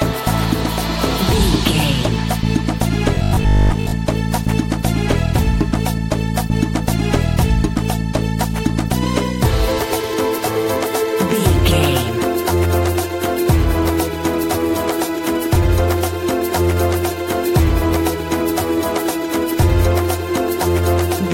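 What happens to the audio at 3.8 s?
At 3.8 s you're inside a stretch of robotic sound from repeated short buffers, running from about 3.15 to 3.95 s. It's likely that fresh audio stopped arriving in time, so a 20 ms chunk got looped for most of that stretch, stamping a rigid, metallic 50 Hz buzz over the sound.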